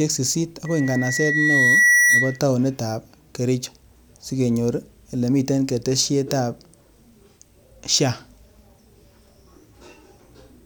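From 0.66 to 2.39 s, loudspeaker feedback squeal: a 1.9 kHz tone swells over about a second and a half to roughly 5 dB above the speech as the mic-speaker loop runs away.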